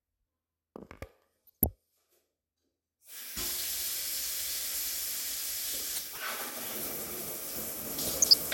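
A short recording of sounds with DAB burbling in three bursts, 1.47 to 1.66 s, 5.94 to 6.22 s and 8.05 to 8.34 s, each lasting about a dozen frames as bit errors, well under one percent, slip past error correction and throw individual sub-bands out of level.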